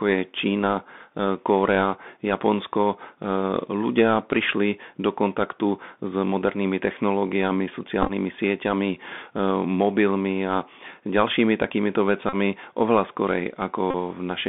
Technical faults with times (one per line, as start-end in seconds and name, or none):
0.00-14.48 Bluetooth CVSD headset codec
8.03-8.11 Bluetooth headset packet repeated
12.29-12.35 Bluetooth headset packet repeated
13.90-13.95 Bluetooth headset packet repeated